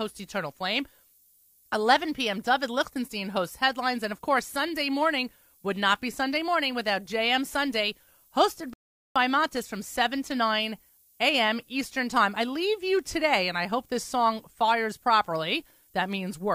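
From the start of the speech to the end, a steady, thin hiss sits under the signal. This is low bit depth with noise shaping: the signal is carried on very few bits, which fits a word length of around 10 bits, and the rounding error is fed back so that its energy moves toward high frequencies. The hiss is roughly 30 dB below the speech and grows markedly brighter toward the top of the band rather than sounding like flat broadband noise.

At 8.73 s the audio cuts abruptly to silence and stays silent until 9.16 s, then picks up exactly where it stopped. This is a rebuffering stall: playback used up its downloaded audio and paused until more data arrived. No speech is skipped or repeated, but the gap adds about 0.42 s to the clip's running time.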